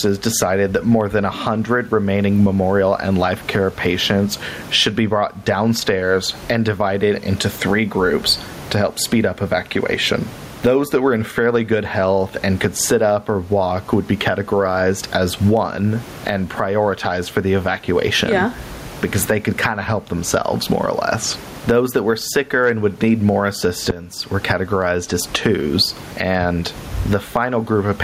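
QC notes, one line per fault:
Throughout: gain pumping. The gain swings by roughly 20 dB. The likely cause is gain set far too high, with a fast limiter or compressor clamping down on every peak. Loud and soft parts sit close together and sound squashed.
23.91 to 24.18 s: phantom power thump. A deep thump lands here and dies away over about 62 ms. A supply switched on or off on a live input sends a sudden step through the coupling capacitors. The result is a low, short blow. The room noise sits about 33 dB below the speech.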